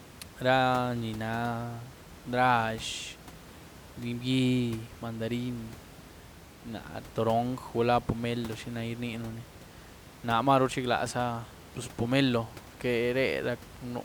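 No technical faults can be heard anywhere in the speech. Room noise from the recording space sits in the background, about 19 dB below the speech.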